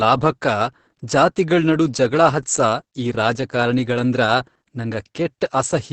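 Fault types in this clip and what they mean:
Opus voice compression: the speech went through Opus's SILK linear-prediction coder at a very low rate, one that fits about 10 kbps. The excitation is coded coarsely and nothing remains above 9 kHz, so it sounds muffled, hoarse and slightly robotic throughout.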